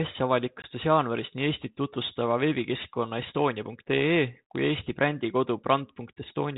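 At 0.62 s the call drops a single packet on its G.726 ADPCM link, a packet loss on an ADPCM call that leaves a 20 ms gap filled with silence. Because ADPCM sends only differences from an adaptive prediction, the receiver's predictor and step size lose track of the sender's during the gap. The hole therefore has abrupt edges, and the speech resuming at "jaanuaris nii" comes back slightly distorted before settling. The 32 kbit/s coding adds only a light grain throughout.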